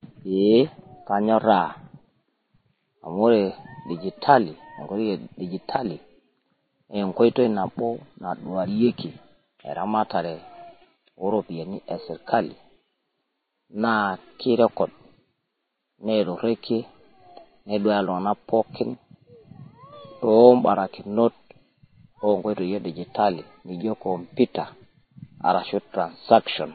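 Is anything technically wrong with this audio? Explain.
Yes. Across the whole speech clip, nothing comes through above about 4.5 kHz, so it sounds dull and boxy. On top of that there's a layered, swirly smear with two different flavours of codec grit at once. That's likely transcoding between lossy codecs, which fits a low-rate MP3 encode around 24 kbit/s followed by a Vorbis pass near 25 kbit/s. The second encoder wastes its few bits reproducing the first one's damage, adds its own, and the low cut-off sticks.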